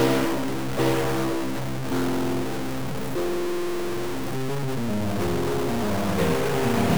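A harsh, buzzy distortion runs through the whole music clip, with quieter passages filling with grainy noise. This is likely a stuck bit: one data bit held fixed, shifting about half the samples by a step of around -25 dBFS.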